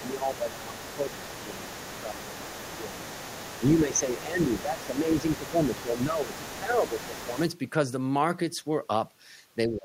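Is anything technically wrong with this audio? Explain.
Yes. From 0 to 3.0 s, 3.59 to 7.38 s and 9.67 s to the end, there is speech suppressed in double talk. The echo canceller likely could not tell the talker from loudspeaker echo while both sides spoke, so it pulled both down. The voice sinks by around 10 dB, and by about 20 dB in the final fragment.

From 0 to 7.41 s, the other side's voice leaks through. The loudspeaker signal was likely not fully cancelled from the microphone, so a second voice sits underneath at roughly 15 dB below the talker.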